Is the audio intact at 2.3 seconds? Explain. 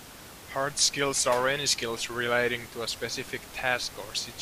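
Yes, the speech at 2.3 seconds is intact, with only the room's own background noise audible about 17 dB below it.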